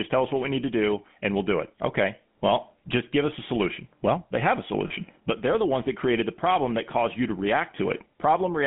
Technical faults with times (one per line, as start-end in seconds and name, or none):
0.00-8.66 GSM full-rate codec
4.88-4.91 lost GSM frames